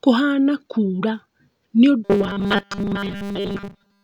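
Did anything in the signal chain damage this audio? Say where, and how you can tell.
Yes, the speech turns into robotic sound from repeated short buffers at the driver or buffer stage, from 2.05 s right to the end. There's a rigid metallic buzz fixed at 200 Hz that only roughly tracks the speech. That pitch points to a chunk about 5 ms long being looped. The likely cause is the audio path running dry and replaying its last buffer to fill the gaps, so roughly seven tenths of the real audio there gets skipped.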